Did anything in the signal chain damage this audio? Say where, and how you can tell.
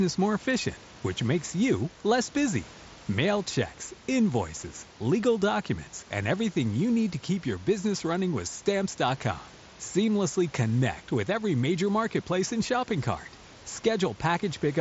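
No, nothing in the signal chain damaged this audio.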